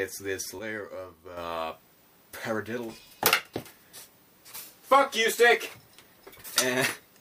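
A gain setting was likely applied without a ramp, producing a sudden gain jump from 0.59 to 1.37 s, where the audio and its background noise drop together by about 7 dB.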